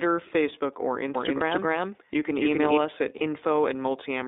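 The iLBC codec colours the whole speech clip. Its band runs from 250 Hz to 3.7 kHz, and the sound is rough and synthetic. The 30 ms frames suggest the 13.33 kbps mode.

From 1.15 to 2.77 s a doubled audio track appears. A second copy trails about 300 ms behind at roughly equal level, likely from a slower capture path. It starts and stops abruptly, ending just before "us at".

Lost iLBC frames fall at 1.37 to 1.42 s and 3.18 to 3.22 s, the second right after "us at". Each drops one 30 ms frame. The decoder repeats a pitch cycle, leaving a short buzzy held vowel.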